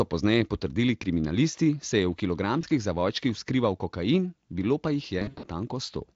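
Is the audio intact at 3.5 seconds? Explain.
Yes, the audio is intact at 3.5 seconds, with no fault at that moment.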